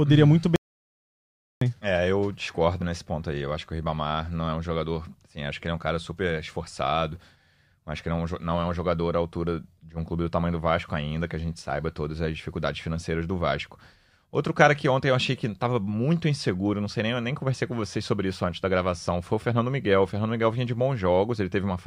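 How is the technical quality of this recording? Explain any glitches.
The recording has one clear glitch, an audio dropout to silence early in the speech. At 0.56 s, right after "uhum muito", the signal vanishes completely until 1.61 s, and about 1.06 s of speech is lost. Likely the input was momentarily disconnected or muted while recording continued, writing silence. With no room tone, the gap sounds dead. On a waveform it is a flat line, and on a spectrogram it is a dark vertical band with abrupt edges.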